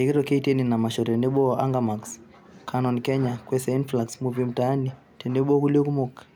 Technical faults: none

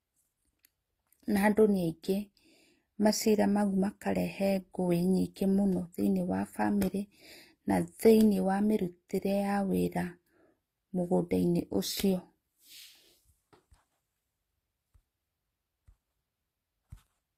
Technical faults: transcoding between lossy codecs

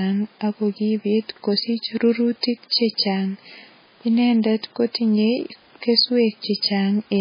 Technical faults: MP3 compression

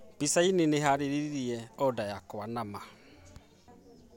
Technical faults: none

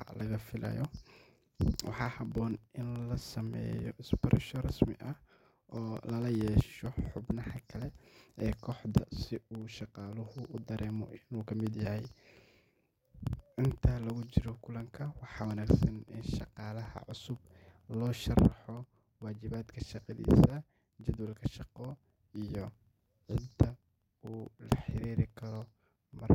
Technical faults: periodic USB or driver dropouts

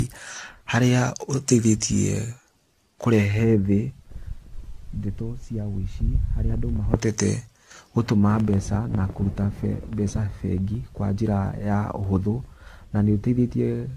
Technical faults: generation loss

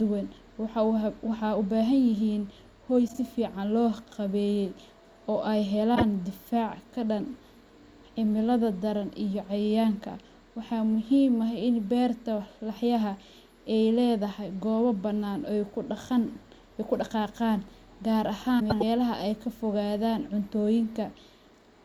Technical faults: frames out of order

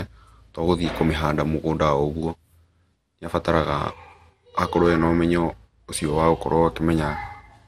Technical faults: generation loss

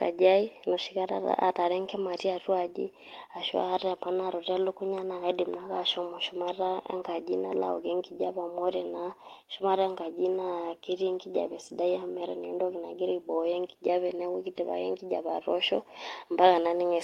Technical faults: none

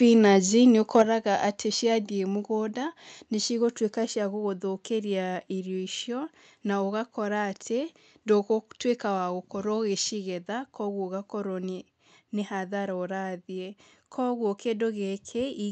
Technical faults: microphone overload; microphone volume stepped down

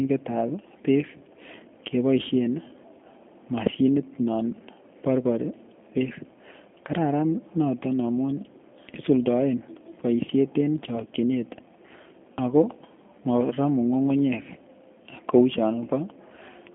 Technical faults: G.729 codec

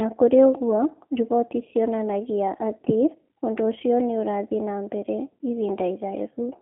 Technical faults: G.729 codec

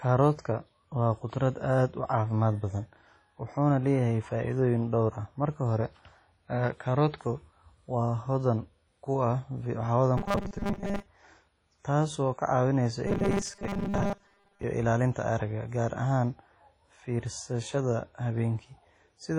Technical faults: WMA compression; robotic sound from repeated short buffers

